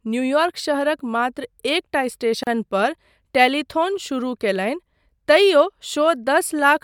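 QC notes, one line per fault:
2.43 to 2.47 s, gap at a join of encoded pieces: the speech cuts out for about 35 ms and resumes exactly where it stopped. Two separately encoded chunks were joined untrimmed, so encoder start delay and end-frame padding sit there as silence with smeared edges.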